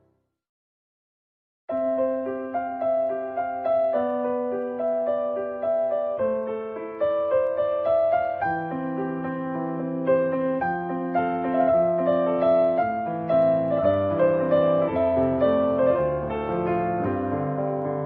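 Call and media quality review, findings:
Clock slip clicks, 0.23–17.82 s: faint ticks about every 0.3 s, evenly spaced, unlike random dropouts. Likely unlocked device clocks roughly 70 ppm apart, each slipping one sample.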